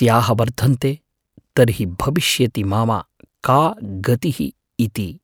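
No technical faults can be heard anywhere in this speech recording. Nothing in it calls for a time or a value to be reported.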